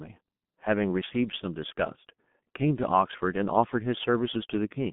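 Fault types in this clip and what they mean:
G.723.1 codec: Throughout the speech, the band is narrowed to roughly 150 Hz to 3.5 kHz, and heavy low-rate coding in 30 ms frames, consistent with about 6.3 kbit/s, leaves the voice muffled and hoarse, with smeared consonants from the codec's slowly updated voice model.
Sudden gain jump: From 1.96 to 2.07 s, the speech and background noise drop together by about 8 dB with no fade, then return. This is likely a digital gain change or bit shift applied instantly, without a ramp.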